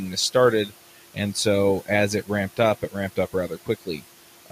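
From start to finish, the background noise drops away in the pauses and swells back up underneath the speech, so the noise floor seems to pump in time with the talking. These are noise suppressor artifacts. The suppressor estimates the steady room noise, which sits about 20 dB below the speech, and pulls those bands down by about 12 dB frame by frame. When speech arrives, the gain opens and the noise comes back with it.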